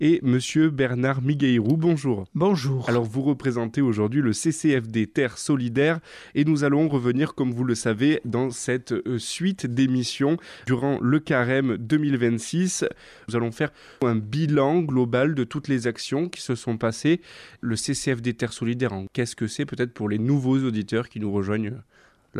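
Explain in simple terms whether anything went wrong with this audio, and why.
Nothing went wrong here: no technical fault can be heard anywhere in the recording.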